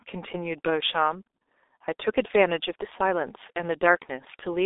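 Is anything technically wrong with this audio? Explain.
Yes, the whole clip has gone through a G.723.1 codec, and pretty heavily. From start to finish nothing reaches above about 3.8 kHz, and the band sits roughly between 300 Hz and 3.7 kHz, which fits an old telephone line. The coder chops speech into long frames and rebuilds it from a slowly updated vocal model at what sounds like around 6.3 kbit/s. So you get a muffled, hoarse speech with smeared consonants.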